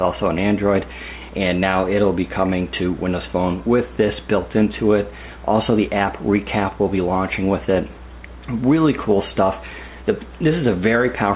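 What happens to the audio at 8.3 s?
Nothing goes wrong at 8.3 s; the audio plays through that moment without any audible dropout, click or distortion.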